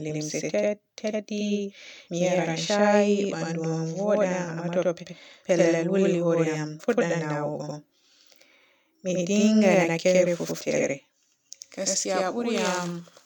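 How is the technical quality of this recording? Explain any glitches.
The speech carries a channel delay (doubling) fault that runs the whole clip. Every syllable is followed about 93 ms later by an equally loud copy, a slap echo. One channel lags, consistent with a 4096-sample buffer, and the two are summed to mono.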